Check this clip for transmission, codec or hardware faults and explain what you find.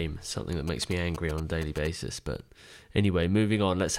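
One fault is present: GSM signalling bursts. From 0.68 to 1.87 s, a galloping dit-dit-dit pattern of short buzzes sits under the speech, roughly 15 dB below it. A nearby 2G phone was signalling to its network, sending short clusters of radio bursts rather than a steady stream. Some part of the audio circuit rectified that radio energy into sound. The buzz repeats at about 217 Hz, the GSM burst rate.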